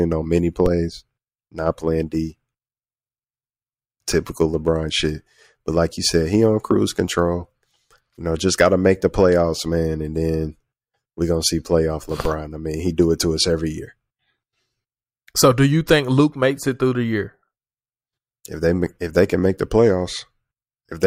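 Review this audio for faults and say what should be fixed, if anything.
Two DC steps occur, at 0.66 s and 12.25 s. At each point the waveform's zero line suddenly jumps by about -10 dBFS. The jump then drains away through a 20 Hz high-pass, and each step is heard as a low thump or click. Unlike a plosive pop or a dropout, the speech carries on unbroken and undistorted across both thumps. Keeping offset-carrying inputs AC-coupled, or blocking DC before the converter, prevents this.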